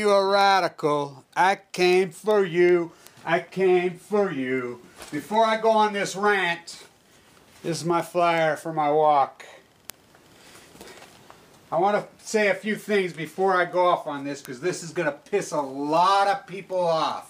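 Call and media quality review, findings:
Word clock ticks: sharp, uneven ticks about every 0.4 s, 0.41–17.11 s. Unlocked digital receiver, about 50 ppm mismatch, one sample slipped per tick.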